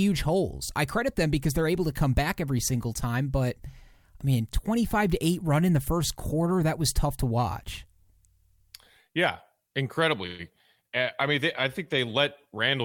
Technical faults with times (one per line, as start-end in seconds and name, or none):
none